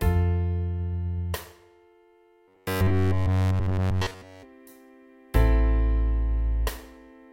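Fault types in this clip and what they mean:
Robotic sound from repeated short buffers: from 2.48 to 4.43 s the sound turns into a rigid, metallic buzz at about 94 Hz, likely because fresh audio arrived too slowly and a fragment of roughly 10.7 ms was replayed over and over. The entire stretch is repetition. On a waveform it shows as an identical short cycle tiled end to end. A spectrogram shows evenly spaced harmonic lines at multiples of 94 Hz.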